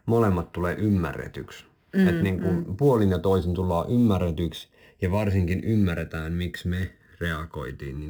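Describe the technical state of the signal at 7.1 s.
At 7.1 s the speech carries a slow, swirling flanging colour, because the channels drifting apart fault runs through the whole clip. The two channels are timed by clocks that disagree by something like 100 parts per million, so the offset between them keeps creeping and has reached roughly 0.7 ms by the end. Heard summed to mono, that shifting delay moves comb-filter notches gradually across the spectrum, giving the hollow, sweeping tone.

Layered on top is a grainy hiss or roughness that grows on the louder and brighter parts of the speech and drops away in the pauses. This is sample clock jitter, also present from start to finish. The converter's timing wanders on the order of ten microseconds, so each sample is taken slightly early or late. The resulting error scales with how steeply the waveform is changing, sitting roughly 30 dB below the signal.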